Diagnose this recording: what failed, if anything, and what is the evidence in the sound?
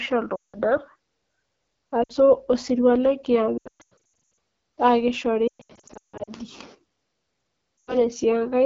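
The codec stage is the culprit for the texture running through the whole clip. This is the AMR wideband (HD Voice) codec pushed down to one of its lowest modes, and the rough, raspy grain on the speech fits a rate around 8.85 kbit/s. At that rate the pulse-driven vocal tract model gets very few bits per frame, so the excitation sounds buzzy, and the band above 6.4 kHz is just shaped noise rather than real detail.

The radio link caused the dropouts, which are lost AMR speech frames concealed by the decoder. The clearest runs are 0.35 to 0.57 s, about 180 ms of gaps, where the sound drops to near silence, and a short 60 ms hiccup at 2.03 to 2.12 s. From 3.58 to 3.94 s and 5.47 to 6.30 s the losses come in scattered bursts, the longest runs being 120 and 160 ms, so you get repeated warbles and fades. There's another 100 ms dip at 7.81 to 7.96 s. Each time the decoder keeps replaying the last good pitch and filter settings at falling gain, and the speech comes back weak and rough for a moment.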